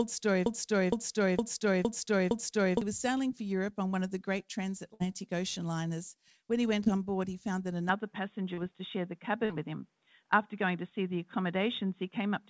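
Speech carried over a G.722 call path at 64 kbps, with audio up to 8 kHz. From 0.46 to 2.82 s a broken-record loop repeats one 462 ms fragment five times back to back, likely from a stalled stream resending its last buffer, and the intended audio for that span is lost. A burst of packet loss at 4.94 to 5.02 s drops about 60 ms, bridged by a fading continuation of the preceding sound before playback resumes further on. Short concealed packet loss appears at 6.84–6.88 s, 8.54–8.59 s and 9.45–9.51 s, each 23 to 41 ms synthesized from the prior sound, heard as brief smears. At 7.89 s the input switches to a poorer device, likely another microphone or a headset call profile, with no gap and no level jump: everything above 3.8 kHz vanishes, the sound turns dull through the end, and a faint new noise floor sits roughly 50 dB down.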